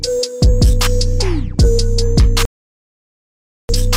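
At 2.45 s the sound drops out abruptly and stays silent until 3.73 s, a digital broadcast dropout lasting about 1.24 s. The receiver stopped getting decodable frames, through signal loss or failed checksums, and muted its output until valid data returned; a gap this long points to a run of roughly thirty consecutive bad frames. On a waveform the trace collapses to a flat line; a spectrogram shows a clean, full-height blank band across every frequency.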